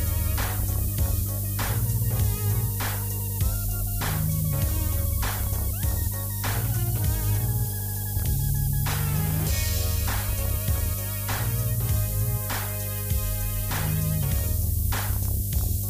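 Mains hum runs from the start of the clip to its end: a steady low tone at 50 Hz, with weaker harmonics stacked above it. Power-line current has leaked into the signal path, most plausibly through a ground loop or stray coupling from a transformer. The hum sits at roughly the same level as the wanted sound, so it is never masked. It forms a constant droning floor beneath everything.

Low bit depth with noise shaping is also present for the whole duration. It is heard as a thin, fizzy hiss that climbs sharply toward the top of the frequency range. The signal has been quantised to very few levels, which fits roughly 4 bits. The rounding error has then been pushed upward in frequency rather than spread evenly. That hiss is only a little below the wanted sound, so the top end stays bright and gritty throughout.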